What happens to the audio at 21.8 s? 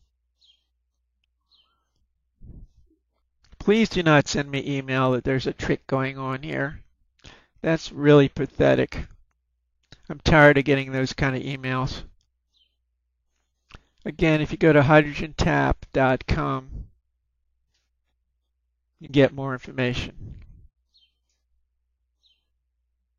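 Nothing goes wrong at 21.8 s: the audio carries on intact there, with no dropout, click, distortion or other fault to be heard.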